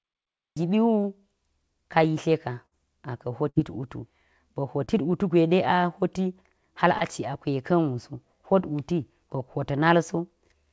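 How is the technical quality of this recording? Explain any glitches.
The recording has clear network and capture faults. It passed through a call path that leaves nothing above 8 kHz, which fits a wideband call codec such as G.722 at 64 kbps.

The clip has a cut-off start. From 0.0 to 0.57 s there is only digital silence. Then the speech appears abruptly at 0.57 s, already in the middle of a sound. Capture began late, so the opening of that sound was never recorded. There is no natural attack or fade-in. The audio simply switches on.

There are two bursts of packet loss, at 2.66 to 2.74 s and at 3.49 to 3.58 s. Each time about 60 ms of audio never arrived in time. The receiver covered the hole by extending the last sound for 54 ms and then 60 ms, lowering it as it went. You hear a held, fading continuation instead of real speech. Then the speech resumes further along, with that stretch missing.

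Two short concealed packet losses follow, at 4.84 to 4.91 s and at 6.98 to 7.03 s. In each, about 30 ms failed to reach the decoder. The receiver synthesised 32 ms and then 28 ms from the preceding sound and blended back into the real audio. Each loss is heard as a brief smear or wobble. It is shorter than the earlier bursts.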